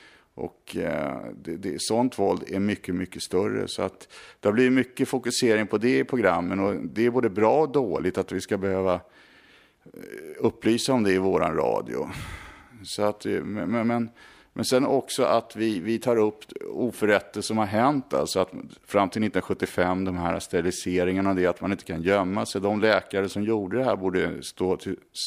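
No technical faults can be heard in the speech at any point, and the signal holds steady throughout.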